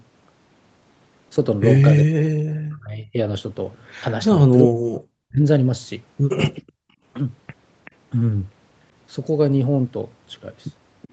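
Speech suppressed in double talk hits this speech recording twice, from 2.03 to 3.17 s and again from 4.3 to 5.42 s, with the voice pushed down by something like 40 dB for roughly a second in each stretch. The likely cause is an echo canceller facing both ends talking at once: unable to tell the local talker from the loudspeaker's echo, it clamped the whole signal, taking the wanted speech down with the echo. Echo leak follows at 6.55 to 6.72 s, where a faint copy of the speech returns 380 ms late, roughly 20 dB under the voice, with two shorter, weaker scraps, around 30 dB down and with the same 380 ms delay, at 7.85 to 7.91 s and 11.02 to 11.08 s. These are likely residue from a far end playing the call on a loudspeaker, where its canceller failed to remove everything its microphone picked up and sent the leftover back. Background gated by the echo canceller comes straight after the first leak, from 6.72 to 7.03 s, when the room sound drops by about 40 dB for about 300 ms. 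There the canceller, reacting to loudspeaker activity, forced the microphone down hard, then released it so the ambience returned. The whole recording is band-limited to 8 kHz, consistent with a wideband Opus call path.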